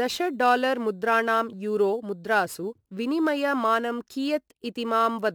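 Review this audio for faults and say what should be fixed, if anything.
Crude rate conversion runs through the whole speech clip, adding a gritty, inharmonic fizz on louder and brighter sounds, roughly 30 dB down. It sounds like a 48 kHz to 44.1 kHz conversion done by grabbing the nearest sample. Redo the conversion with a proper band-limited resampler.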